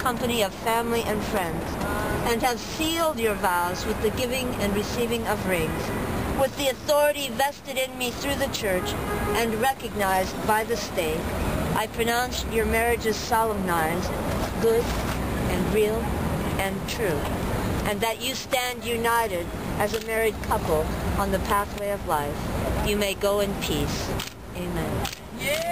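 No dropouts, clicks, clipping, rate errors or level jumps are audible anywhere in the clip.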